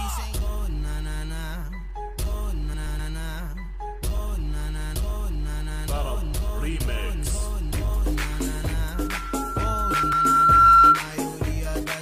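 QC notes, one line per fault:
2.74–3.00 s and 9.94–10.13 s, frames out of order: each stretch breaks into a brief garbled flutter. Two neighbouring runs of frames were decoded in swapped order, so each stretch plays its second half first. That puts three joins in each span. The first swap exchanges two 128 ms blocks, the second two 96 ms blocks, which fits 32 ms frames. Nothing is lost; the material is only rearranged.
8.94–11.03 s, loudspeaker feedback squeal: a single tone at 1.4 kHz rises from faint to a piercing squeal over about two seconds, reaching about 15 dB above the rest of the sound before it stops. A microphone was picking up the loudspeaker it fed, and at that one frequency the round-trip gain exceeded unity. The tone fed on itself and grew. The second reordered stretch falls inside this squeal.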